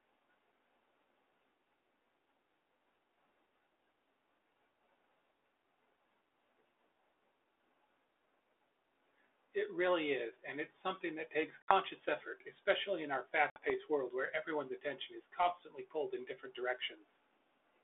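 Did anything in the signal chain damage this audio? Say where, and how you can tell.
Yes. Network packet loss on an ADPCM call: hard-edged silences at 11.62 s (after "it's something that takes") and 13.50 s (after "effort especially in our"), each about 60 ms (a few packets), leave the decoder's predictor and step size out of step with the sender.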